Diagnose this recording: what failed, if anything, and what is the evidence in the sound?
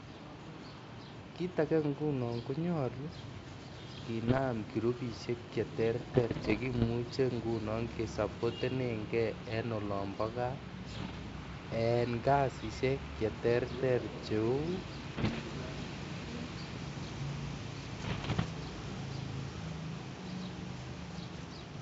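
Bit errors on an ADPCM link in the G.722 transmission path corrupted the coded stream in bursts at 4.28–4.41, 6.15–6.85, 10.94–11.18, 15.14–15.41, 17.96–18.49 and 21.33–21.44 s, at error rates of roughly 0.5 to 1 percent. Each flipped bit throws the decoder's step size and predictor off, so the speech breaks into pops and rough, level-jumping bursts before recovering.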